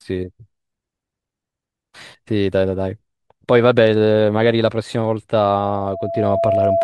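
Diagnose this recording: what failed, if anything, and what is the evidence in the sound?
Loudspeaker feedback squeal, in the acoustic path between speaker and mic. From 5.57 s a steady 671 Hz tone swells over roughly a second to about the level of the speech and rings until 6.83 s. The mic is hearing its own speaker, and at that frequency the loop gain tops one.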